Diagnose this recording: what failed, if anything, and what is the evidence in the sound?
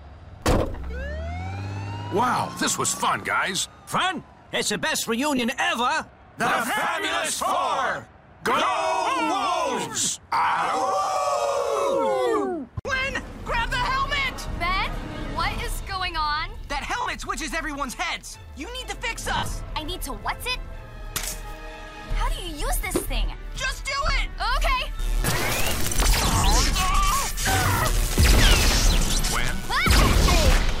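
The fault is lost LE Audio frames on the Bluetooth link, concealed by the LC3 decoder at 5.37–5.39, 11.04–11.16, 17.01–17.06, 19.37–19.51, 24.07–24.10 and 26.38–26.44 s. Each gap sounds like a short noisy smear where tonal detail goes grainy. The decoder repeats the last spectrum with random signs and fades it when the loss runs longer. The 11 s and 19 s dropouts are scattered bursts, the longest run near 70 ms. On a spectrogram, harmonics blur into broadband texture. The waveform shows a dip in level.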